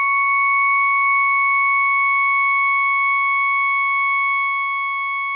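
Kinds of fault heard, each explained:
No faults are audible in this music clip.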